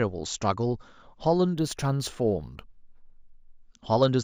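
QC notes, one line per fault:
1.54–3.59 s: imaging from linear upsampling. The speech was raised from 16 kHz to 48 kHz by straight-line interpolation, a poor anti-imaging filter, so the top of the band is dulled and a mirrored copy of the spectrum sits between 8 kHz and 16 kHz, roughly 25 dB down, giving sibilants a faint metallic shimmer.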